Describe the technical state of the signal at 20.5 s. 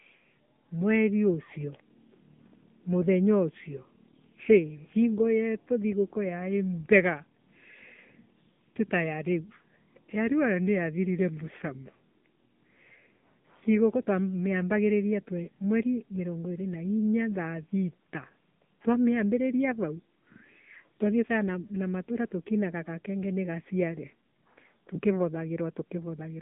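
At 20.5 s the speech carries AMR narrowband mobile codec damage, present throughout. Pulse-driven vocal-tract modelling sounds buzzy and synthetic, consistent with a low bitrate. Nothing passes above 3.6 kHz or below 150 Hz.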